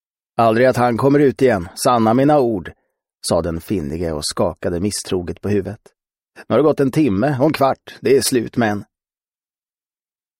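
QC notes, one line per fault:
No faults heard.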